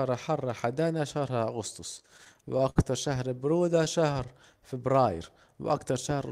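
From 1.99 to 2.78 s, repeated stalls (stutter): packets arrived late, the jitter buffer emptied nine times, and concealment stretched the speech by 142 ms, so it drags. From 4.06 to 4.58 s, jitter buffer slow-down: repeated pitch periods add 41 ms, playing at 94% speed with unchanged pitch.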